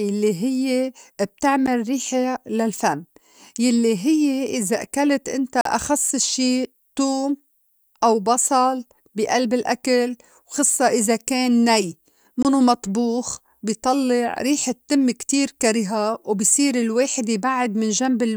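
Blocks of digital silence cut the speech at 1.66 s (11 ms), 5.61–5.65 s (43 ms) and 12.43–12.45 s (21 ms), lengths that fit unfilled 512-, 2048- and 1024-sample buffers. Each appears as a near-flat line and a blank spectrogram stripe.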